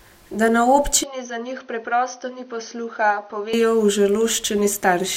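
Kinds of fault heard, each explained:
Input switched to a poorer device: from 1.03 to 3.53 s the speech turns duller and roughly 10 dB quieter, likely from a change to a narrower-band microphone. A spectrogram shows nothing above 6.3 kHz, with a faint new noise floor. The waveform shrinks with no gap at either switch.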